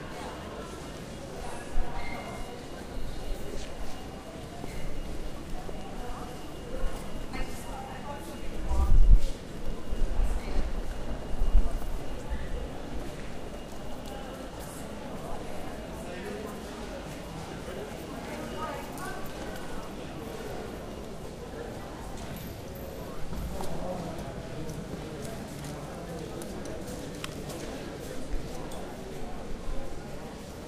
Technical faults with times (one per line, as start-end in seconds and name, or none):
none